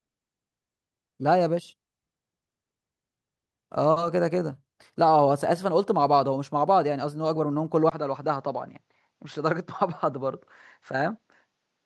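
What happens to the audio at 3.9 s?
A short stall from a late packet, 3.91 to 3.98 s: the jitter buffer ran dry, so about 50 ms was held and stretched with a slight buzz or dip, then resumed with nothing skipped, unlike a lost packet.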